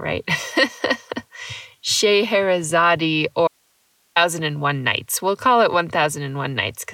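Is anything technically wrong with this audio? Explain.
Yes. There is an audio dropout to a faint residue in this speech from 3.48 to 4.16 s. The speech cuts off abruptly and returns just as suddenly about 0.68 s later. The gap holds only hiss, at roughly 45 dB below the normal signal level. The likely cause is a brief loss of the wanted signal upstream while the path after the break stayed live, passing its own noise floor. It is a hard break, not a pause or a fade.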